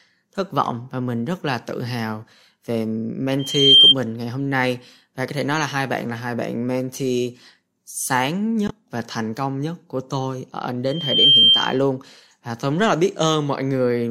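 At 3.39 to 3.95 s a microphone is picking up the loudspeaker it feeds, and at 3.2 kHz the loop gain passes one, so that frequency feeds on itself. This is loudspeaker feedback squeal: a thin, piercing tone that swells over roughly a third of a second until it sits about 15 dB above the speech.

At 8.66 to 8.71 s the compressed stream carries damaged data. The decoder misreads the corrupted frames, loses sync and hunts for the next valid frame header, so the speech is replaced by a brief glitch lasting about 50 ms.

The feedback squeal returns at 10.87 to 11.81 s, again at 3.2 kHz, the same frequency where the loop gain exceeds one. This time it takes a little under half a second to build and peaks lower, about 10 dB above the speech, but rings for nearly a full second.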